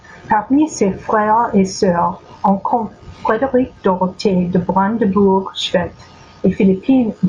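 Throughout, gain pumping swells the background in pauses and ducks it about 15 dB under loud syllables, likely excess mic gain into a fast limiter. The waveform looks flattened.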